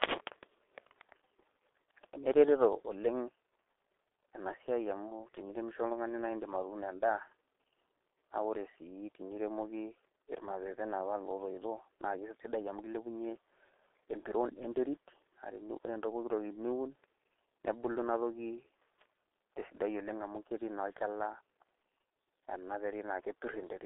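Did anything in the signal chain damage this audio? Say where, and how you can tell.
Yes, at the codec stage, and it runs the whole clip. It sounds like a G.723.1 codec: the speech is muffled and hoarse with smeared consonants, nothing above 3.8 kHz, and a 300 Hz to 3.6 kHz phone band. That heavy damage fits roughly 6 kbit/s with slow model updates.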